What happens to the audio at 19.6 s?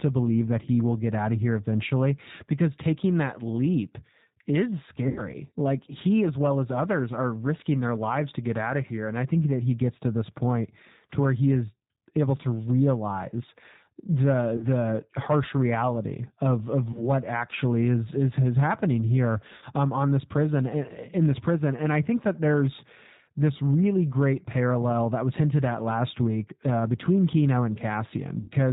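Between about 19.58 and 19.64 s, right after "is is happening here" and before "um on this prison", VoIP packets were lost and the speech codec concealed the gap. About 40 ms of audio went missing, which fits two lost 20 ms packets. The decoder kept extending its last pitch and vocal tract filter while turning the gain down, so the speech briefly smears into a fading buzzy tone or coloured noise. Because each frame builds on the previous one, the voice stays weak or distorted for a moment after real packets return.

Underneath this, and across the whole clip, is the G.729 codec, with plainly audible damage. The sound fits an 8 kbit/s G.729A stream, which rebuilds speech from a vocal tract model, a pitch predictor and a few pulses per frame. At 19.6 s, as everywhere, nothing above 4 kHz comes through, and the speech has a rough, somewhat synthetic edge.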